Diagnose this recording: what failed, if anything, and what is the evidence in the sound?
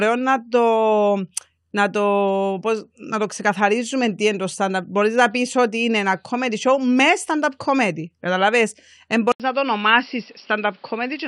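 Driver-level fault: at 9.32 s there's an 80 ms gap, then nothing above 5.5 kHz and new background noise. The input likely switched to a poorer device.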